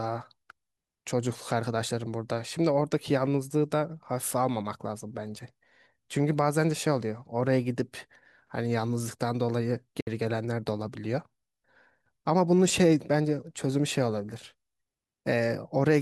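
Bluetooth dropout at 10.00 to 10.07 s: the speech cuts to silence, losing 61 ms, then resumes further along as though it had kept playing. Packets likely reached the headphones too late and were discarded, which fits three lost packets.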